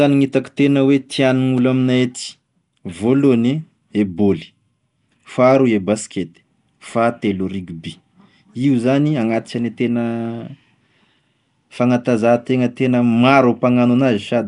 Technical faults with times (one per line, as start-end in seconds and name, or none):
0.00-14.47 Nellymoser compression